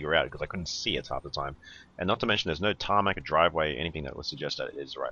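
No technical faults can be heard anywhere in the audio, which holds a steady, intact signal throughout.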